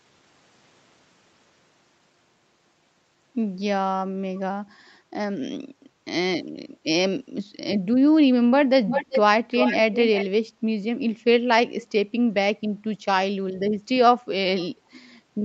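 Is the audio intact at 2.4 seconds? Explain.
Yes, the speech at 2.4 seconds is intact, with nothing there beyond the ordinary call microphone processing and the WebRTC call path, which limits the sound to about 8 kHz.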